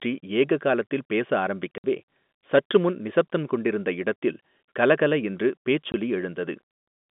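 At 1.78 to 1.84 s the speech drops out for 60 ms, then again at 5.92 to 5.94 s for 20 ms. This is packet loss filled with silence. Lost packets were replaced by dead air, about three 20 ms packets, then one. Each gap has hard edges against the narrow telephone band.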